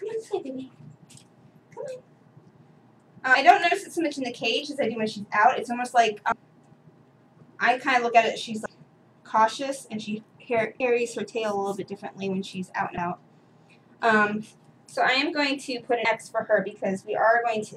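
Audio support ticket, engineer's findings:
Compressed frames skipped: six forward jumps at 3.34, 6.32, 8.66, 10.80, 12.98 and 16.05 s. The sound loses about 0.2, 0.4, 0.15, 0.1, 0.15 and 0.1 s respectively. Skip sizes fit whole multiples of a 32 ms frame. Probable component: decoder dropping missing or corrupt frames.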